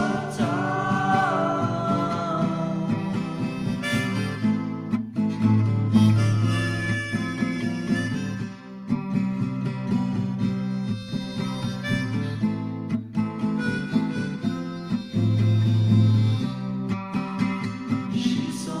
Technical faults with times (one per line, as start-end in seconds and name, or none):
none